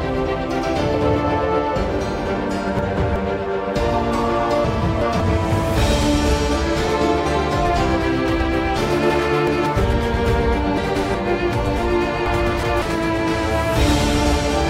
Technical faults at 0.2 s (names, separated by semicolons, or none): none